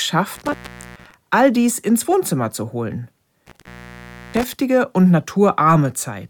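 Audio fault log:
0.35–1.14 s and 3.47–4.54 s, intermittent contact: a loose connection opens for about 0.42 s, then 0.67 s, cutting the sound to faint hiss, with crackle at each break.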